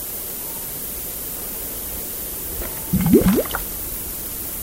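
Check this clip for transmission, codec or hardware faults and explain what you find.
Two faults are present. A low bit depth with noise shaping runs throughout, and DAB burbling appears twice.

Low bit depth with noise shaping lasts the whole clip. The signal is reduced to 5 bits. Rounding error is pushed upward, giving a thin hiss roughly as loud as the sound itself.

DAB burbling occurs from 1.93 to 2.01 s and from 3.83 to 3.99 s. Bit errors slipped past error correction into the audio data and put short blips of noise in single sub-bands. The result is a brief burst of burbling.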